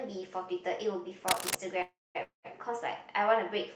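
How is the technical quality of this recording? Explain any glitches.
The recording has three glitches: one burst of scratching and two short freezes, all in the middle of the speech.

From 1.28 to 1.57 s there is cable scratch noise, likely from a worn connector shifting. It is a rough rustle about as loud as the speech and shows as ragged broadband smears on a spectrogram.

A call audio freeze runs from 1.82 to 2.17 s, and another from 2.23 to 2.47 s. Delayed packets likely emptied the jitter buffer. The last sound buzzes or hisses and fades into silence, with about 200 ms of silence in the first and 120 ms in the second. On the waveform these show as a decaying tail, then a flat gap. Nothing is lost; the speech simply resumes later.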